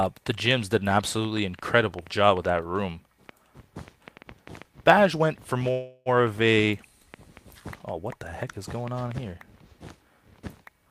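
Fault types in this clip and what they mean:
Train of clicks: From 0.03 s to 9.12 s, roughly 40 similar pops arrive at an uneven pace averaging about 3.9 per second, peaking around 5 dB above the surrounding sound and heard through the pauses as well. The likely source is interference or a faulty connection or supply. Unlike crackle from a damaged recording, which varies in shape, these pulses repeat with much the same form, and unlike a single dropout click, they keep coming.
Call audio freeze: At 5.71 s the sound stalls for 344 ms, ending at 6.09 s, and the gap is filled with a decaying continuation of the last sound rather than silence. The likely cause is delayed packets draining the receiver's jitter buffer. What separates it from a packet-loss dropout is that no audio is lost: playback resumes exactly where it stopped, so everything after it runs 344 ms later.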